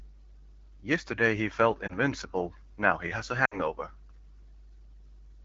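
A speech recording with two brief disruptions. At 1.87 to 1.96 s the sound dips or warbles, which fits a single lost 20 ms frame. At 3.46 to 3.59 s it drops to near silence, then returns weak or rough, consistent with about 60 ms of consecutive loss. These are lost AMR speech frames: corrupted frames were discarded and the decoder repeated its last good pitch and vocal-tract settings at decaying gain. The clean AMR wideband coding around them points to a mid-range rate.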